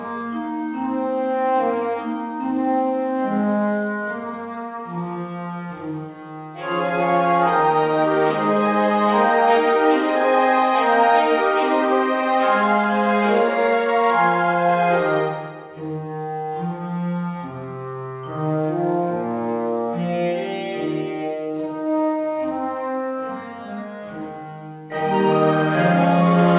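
No faults are audible; the sound comes through a call path with nothing above 4 kHz, consistent with narrowband telephone coding such as G.711, and there are no dropouts, glitches or level jumps.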